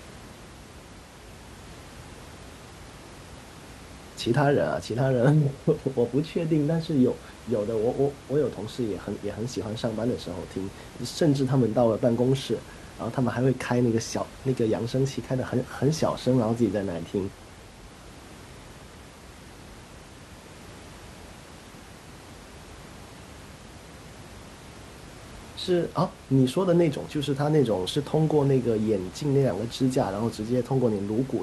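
Nothing stood out on listening to the speech, with only the room's own background noise audible, sitting about 20 dB below it.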